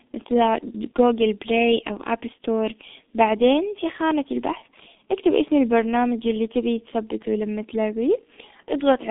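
Throughout, G.723.1 codec damage is heavy: nothing passes above 3.7 kHz, the band sits near 200 Hz to 3.6 kHz, and the sound is muffled and hoarse, which fits roughly 6 kbit/s coding.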